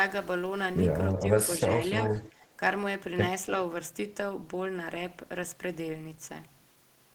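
At 1.17 to 1.22 s and again from 2.17 to 2.45 s, a faint copy of the speech returns about 0.29 s late, the second much quieter. This echo leak is likely a loudspeaker side's canceller letting sound through; unlike room reverb, it is a distinct delayed repeat.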